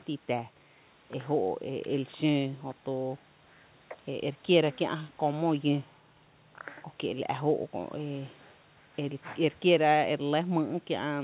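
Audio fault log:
No faults heard in this speech recording.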